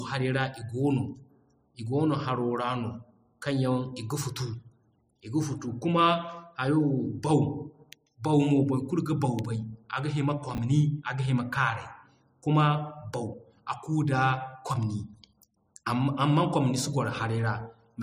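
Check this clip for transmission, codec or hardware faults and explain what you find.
One fault: chunks out of order at 10.55 to 10.58 s in this speech. A 10 ms chunk arrived two chunks late and plays after its successors, leaving a brief jumbled flicker with three hard joins. Unlike a dropout, nothing is missing and no silence appears.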